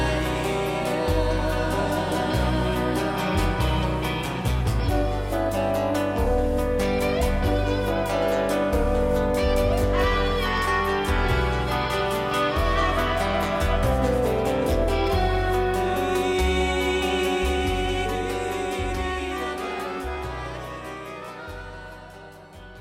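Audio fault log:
Nothing stood out as a fault on listening.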